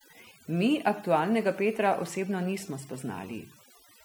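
A speech recording with overdone noise removal throughout: frequency bands near the noise estimate are pulled down hard, leaving near-silent gaps with twinkling specks, and quiet parts of the voice go with them.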